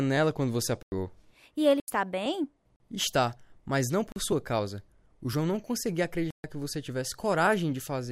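Five hard dropouts break up this speech, each a block of digital silence: 0.83 to 0.92 s right after "quando você", 1.80 to 1.88 s, 2.76 to 2.80 s, 4.12 to 4.16 s between "mas não" and "sua causa", and 6.31 to 6.44 s between "não conseguia" and "que você". The sound just cuts out and back with no fade. The 40 ms ones come across as short holes, the longer ones as longer holes.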